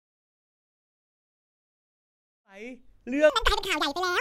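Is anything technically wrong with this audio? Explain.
Yes. A section at the wrong speed runs from 3.30 s to the end at 4.20 s. It plays at 1.95 times its recorded speed, likely from being fitted to the wrong clock, so the speech jumps about ten semitones higher and sounds rushed and squeaky. It comes just after a smooth fade-in that finishes at 3.05 s.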